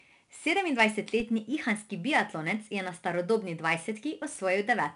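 Throughout, 4-bit ADPCM compression codes each sample as a coarse step from a prediction. Gritty hiss follows loud speech. Nothing sounds above 10.6 kHz.

At 1.20 s, a DC step jumps the waveform's zero line. It is heard as a low thump. The offset then decays, as a 20 Hz high-pass drains it.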